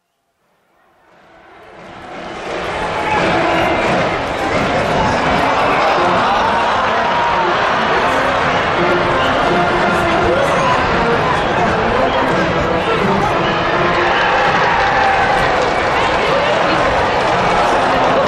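The audio opens with a fade-in that runs from the start to 2.95 s and carries truncation distortion on a fade. From 0.0 to 1.47 s, where the level is lowest, the rising sound is gritty. The gain stage kept too few bits and added no dither, so the quiet waveform collapses into coarse square steps. The coarseness fits roughly 11-bit resolution. Unlike gate chatter, the grit follows the fade's own slow level rise, and it eases as it gets louder.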